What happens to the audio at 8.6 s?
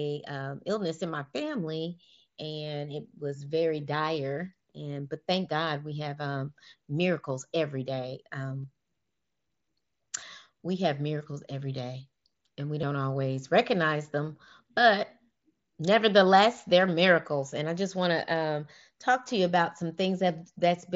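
At 8.63 s, just after "um miracles every day", there is a brief concealed Bluetooth headset packet loss lasting about 15 ms, which fits roughly two lost frames. The receiver filled the gap by repeating the best-matching stretch of the preceding waveform, so it sounds like a short buzzy tone held at full level, with a small warble where real audio returns. On a waveform it shows as a short copied cycle pattern. On a spectrogram it appears as a thin vertical seam where the harmonics briefly freeze.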